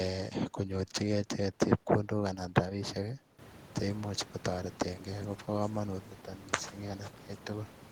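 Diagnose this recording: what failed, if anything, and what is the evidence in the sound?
Nothing failed; room noise rises about halfway, normal.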